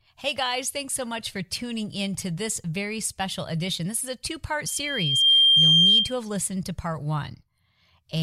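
From 4.66 to 6.18 s, loudspeaker feedback squeal: a 3.2 kHz loop tone swells over under a second, ending roughly 15 dB above the speech.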